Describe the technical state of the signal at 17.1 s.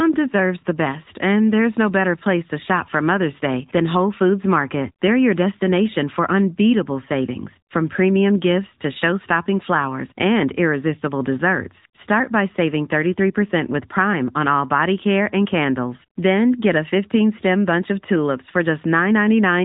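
AMR narrowband mobile codec damage is present at 17.1 s, as it is throughout the speech. The coder rebuilds the voice from a vocal-tract model excited by sparse pulses, so it sounds plainly buzzy and synthetic, consistent with a mid-rate mode near 10 kbps, and nothing above 3.8 kHz survives.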